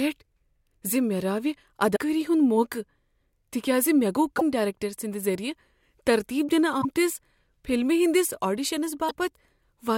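Damaged data in a compressed stream causes brief glitches at 1.92–1.99, 4.35–4.42, 6.81–6.85 and 9.09–9.11 s. Corrupted frames are misread, and the decoder loses sync before recovering.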